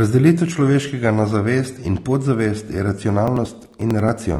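Low-bitrate audio saved at a high bitrate runs throughout: the speech carries the compression artefacts of its first encoding beneath an 18.2 kHz ceiling, likely from a low-bitrate AAC source re-encoded as high-bitrate MP3. Periodic USB or driver dropouts run from 3.09 to 4.36 s, where around fifteen gaps of about 10 ms, spaced every 0.09 s, skip audio and produce a steady ticking.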